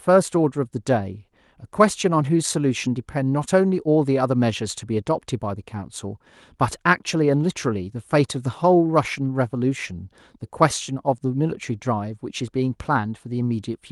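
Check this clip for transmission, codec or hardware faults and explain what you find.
The clip has two related faults, both from the transmission timing rather than the codec, whose Opus coding tops out at about 12 kHz.

Clock drift between sender and receiver runs through the whole clip: the sender's clock is roughly 4 percent fast, so audio arrives quicker than the receiver plays it out and its jitter buffer keeps filling. The speech sounds slightly hurried, with small, unevenly spaced stumbles. On a waveform, syllable spacing looks subtly compressed. On a spectrogram, the formant tracks show faint discontinuities rather than any loss of band.

Repeated timing corrections run from 0.09 s to 13.76 s, netting a playback speed of 104 percent. To drain the surplus, the receiver keeps deleting short slices of audio, always removals and never repeats, at irregular intervals. Each cut is brief, heard as a tiny hiccup or a jolt in tempo. 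A waveform shows small splices where the envelope jumps. A spectrogram shows thin vertical seams where harmonics shift abruptly instead of gliding.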